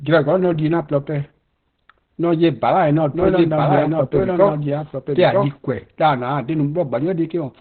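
Throughout, the speech has likely passed through Opus compression at a very low rate, which fits an encoder running around 12 kbps in its narrowband SILK speech mode. Starved of bits, the codec discards everything above 4.3 kHz and models the voice coarsely, so the speech sounds muffled, boxed-in and hoarse, with a thin, telephone-like quality and heavy codec damage that roughens every syllable.

From 3.13 s to 5.49 s, the clip has a doubled audio track. Most likely a second capture path or a misaligned edit has mixed in another copy of the same speech, lagging the original by around a second. That copy sits roughly 5 dB below the main signal with the same full, dry tone and no added reverberation, so the speech overlaps itself like two identical takes. The echo cuts in and out abruptly at both boundaries.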